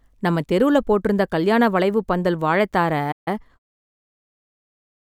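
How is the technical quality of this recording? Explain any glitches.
The recording has two linked glitches near the end: a brief dropout followed by a hurried stretch of speech.

At 3.11 s the speech cuts off mid-flow and the output goes completely silent for about 146 ms, until 3.28 s, before resuming. This is a playback stall. The output simply stops. The likely cause is that the player ran out of buffered data or its audio thread was briefly blocked, so it had nothing to send until it recovered.

From 3.28 s to 4.72 s the speech then runs slightly fast, about 1.1 times normal speed, yet the pitch stays where it should be. This is time-compressed catch-up: having fallen behind during the stall, the player trims its backlog by removing tiny slices of audio and cross-fading across the joins, which shortens the timing without shifting pitch. A smooth fade-out also begins during this stretch, from about 3.5 s to 3.59 s.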